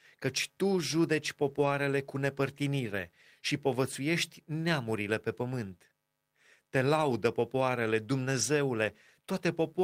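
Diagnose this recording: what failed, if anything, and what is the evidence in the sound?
Brief rough, noisy patches at 1.49–1.67 s (after "căci tu judeci"), 2.91–2.93 s, 6.97–7.15 s and 8.37–8.43 s: network loss, each lost packet rebuilt from error correction.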